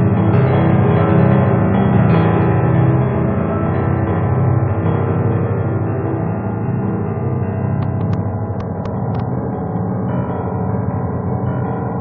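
From 7.83 to 9.21 s a train of clicks ticks unevenly over the sound, about seven sharp pops peaking above it, likely from interference or a faulty connection.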